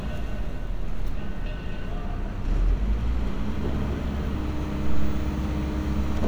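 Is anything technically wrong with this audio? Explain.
No, nothing in this recording stood out as technically wrong on listening.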